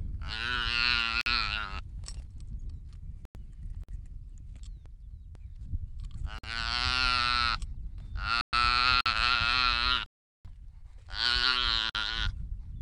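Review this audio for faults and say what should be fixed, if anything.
Hard-edged 50 ms holes at 1.21, 3.84, 6.39, 9.01 and 11.90 s, about every 2.5 s: a gap between chunks, silence padded between chunk joins. Prevent it by trimming codec padding and queuing each chunk before the last ends.

Dropouts to silence at 3.25 s (about 100 ms), 8.41 s (120 ms) and 10.06 s (390 ms) are likely a Bluetooth stall, the headphone buffer emptying while packets wait for resend. Prevent it with a larger receive buffer and less radio interference.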